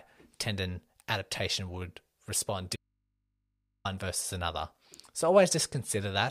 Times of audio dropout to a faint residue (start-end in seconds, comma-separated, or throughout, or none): 2.76-3.85